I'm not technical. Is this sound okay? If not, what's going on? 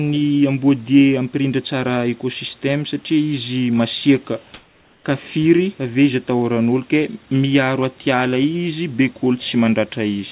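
No. From 4.54 to 5.04 s, about half a second, the natural room noise between phrases turns into a smooth, featureless noise at the same loudness, then the real background returns. This is comfort noise in place of the background. The calling system likely stopped sending sound when it detected a pause, and the receiving end filled that gap with artificial noise imitating the room, which lacks the real background's texture.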